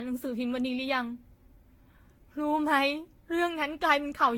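From start to finish the speech sounds swirly and hollow, with smeared consonant attacks and a watery, phasey texture worse than a single encode at a moderate rate would give, and nothing above 19.2 kHz. This is generation loss, likely from the audio being decoded and re-encoded with Vorbis around ten times at a rate fitting roughly 68 kbit/s. Each pass requantised on a shifted frame grid, piling up noise.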